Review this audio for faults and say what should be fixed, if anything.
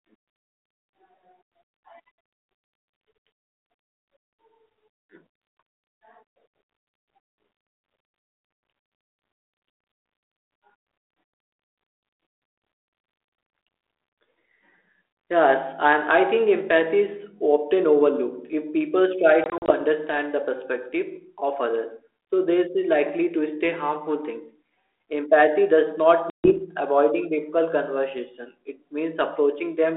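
You get three packet-loss dropouts on an ADPCM call here: a clean 120 ms gap at 8.2 s, a patchier one from 19.44 to 19.71 s just before "understand the" (about 100 ms lost in short bursts up to 40 ms), and 140 ms gone at 26.3 s right before "avoiding difficult conversation". Each hole is hard-edged silence. Because G.726 at 32 kbit/s codes differences from an adaptive prediction, the decoder's predictor and step size drift out of sync with the sender's, so the speech comes back with a click, wrong level or roughness for a few tens of milliseconds. Adding a jitter buffer with packet loss concealment, or sending over a less lossy link, should stop these gaps.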